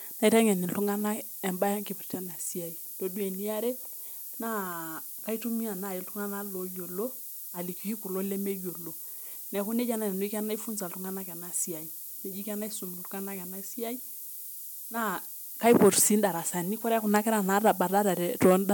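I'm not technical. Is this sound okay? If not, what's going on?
No. From start to finish, the speech sits under a steady, thin hiss that is nearly as loud as the voice itself. This is low bit depth with noise shaping: the audio is stored with very few steps of loudness, roughly what 6 bits would give, and the rounding error is pushed up into the highest pitches. Plain low bit depth sounds gritty and rises and falls with the voice. This hiss stays constant and sounds sharp and bright.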